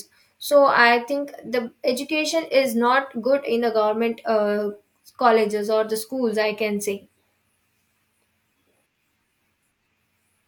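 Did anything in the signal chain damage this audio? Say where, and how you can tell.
No, nothing in the chain audibly damaged this speech.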